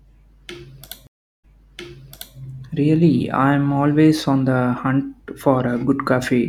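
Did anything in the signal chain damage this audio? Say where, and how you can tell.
Yes. Between 1.07 and 2.37 s the speech drops into about 0.36 s of silence, then resumes roughly 0.94 s earlier, repeating material. This is a network-stage stream reconnect: the connection broke, the player restarted its decoder mid-stream, and the server resent a burst.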